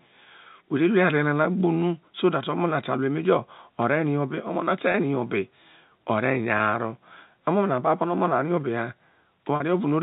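It's a speech clip carried over G.711 telephone coding, band-limited to 4 kHz with faint level-following quantisation hiss. It has three spots of packet loss with pitch repetition: around 4.92 to 4.94 s and 6.58 to 6.60 s, each about 20 ms missing, and 9.56 to 9.60 s, about 40 ms. The receiver filled each gap by looping the last pitch period, so you hear a brief held, buzzy stretch, slightly longer at the last one.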